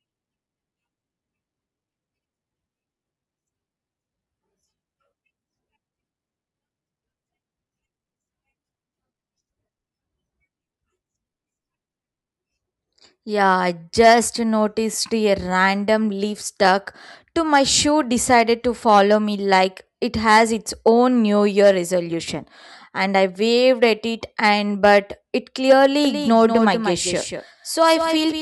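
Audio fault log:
26.05–28.41 s doubled audio track: likely a slower second capture path joins in, so a dry copy about 5 dB down abruptly trails a fifth of a second behind.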